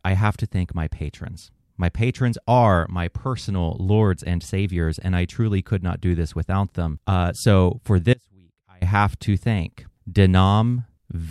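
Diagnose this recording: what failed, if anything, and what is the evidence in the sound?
An audio dropout to a faint residue runs from 8.14 to 8.82 s, after "so for" and before "have to thank". The speech cuts abruptly to a faint leak about 30 dB down. Likely cause: an intermittent analogue connection, with the path left live.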